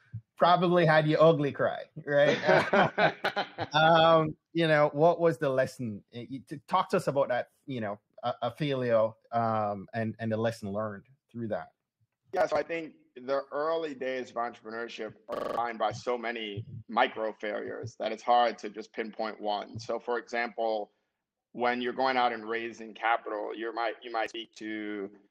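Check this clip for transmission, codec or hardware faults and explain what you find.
One fault turns up, a system hang loop from 15.36 to 15.57 s. There the sound abruptly becomes a rapid mechanical stutter, a tiny fragment hammered out five times at 23.4 repeats per second. The computer or driver stalled while the sound hardware kept replaying the same ring buffer. Each pass lasts 42.67 ms, which fits a 2048-sample buffer, and about a fifth of a second of real audio never arrived.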